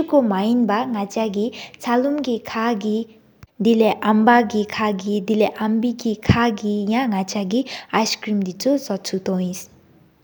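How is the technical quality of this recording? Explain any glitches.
No glitches can be heard anywhere in the recording. There is nothing in the audio that calls for an explanation.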